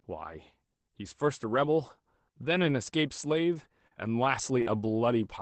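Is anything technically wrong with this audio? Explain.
Yes. This speech, which came through an Opus-style call path whose top end stops near 8 kHz (pointing to a modest bitrate of roughly 20 kbps), has two kinds of network damage in its last two seconds.

Lost packet rebuilt from error correction, at 3.53 s, 4.40 s and 4.66 s: each time a 20 ms packet failed to arrive, but the following packet carried a low-bitrate spare copy of it, and the decoder played that instead. Nothing drops out. Each of those 20 ms stretches comes through coarser and noisier than the audio around it, a brief grainy patch rather than a gap.

Short concealed packet loss, from 3.87 to 3.93 s and from 4.62 to 4.68 s: about 40 ms of audio never reached the decoder in time, and no spare copy was available. The receiver invented a stand-in of roughly 35 ms and 43 ms by extending the last sound it had, then crossfaded back into the real signal. 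Each one is heard as a short smear or wobble, and a brief consonant there can go missing. The second overlaps the rebuilt packet at 4.66 s.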